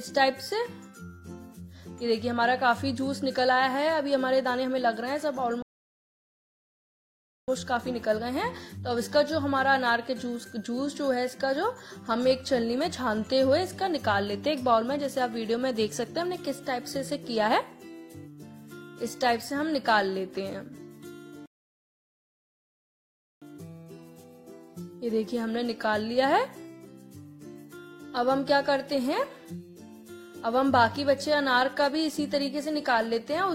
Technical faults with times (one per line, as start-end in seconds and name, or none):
5.62-7.48 rebuffering stall
21.46-23.42 rebuffering stall